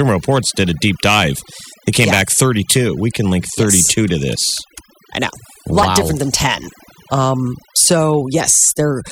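Throughout the speech, overdone noise removal leaves the background near silent except for twinkling specks. Bands near the estimated noise were pushed far down, which on a spectrogram shows as a dark floor dotted with isolated bright blips and ragged, gapped edges around the voice.

At 2.27 s there is a small jump in the sound, and at 5.83 s a longer skip. These are likely dropped buffers (overruns): roughly 10 ms and then about 30 ms of audio were overwritten before being read, and the surrounding audio was joined directly. The waveform shows an abrupt discontinuity with no silent gap, and the spectrogram shows a thin vertical broadband line at each point.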